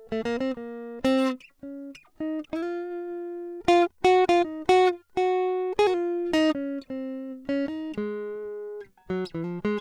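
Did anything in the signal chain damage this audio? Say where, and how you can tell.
No, nothing in the signal chain audibly damages this music, from the converters through to playback.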